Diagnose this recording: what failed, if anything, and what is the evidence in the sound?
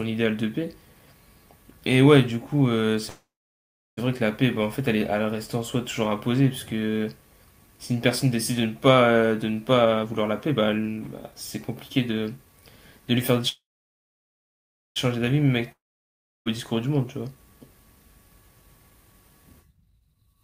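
A call audio freeze, stage network into the jitter buffer, occurs at 3.09–3.99 s and 13.49–14.98 s. The last sound smears into a fading buzz, then about 0.69 s and 1.35 s of flat silence on the waveform. Speech resumes where it stopped, likely because packets stalled and the buffer ran dry.

Jitter buffer speed-up occurs at 9.74–11.37 s (138% speed, roughly 0.7 s trimmed), 11.89–13.40 s (117%, about 0.3 s) and 18.84–20.28 s (108%, about 0.15 s). Pitch stays the same but speech sounds hurried. On a spectrogram, harmonics hold their spacing while syllables are compressed in time.

A long network dropout occurs at 15.72–16.48 s. A decaying buzz fades into about 0.68 s of near-silence, shown as a blank band on the spectrogram. When audio returns, about 0.74 s of the speech is gone, likely because packets never arrived at the receiver.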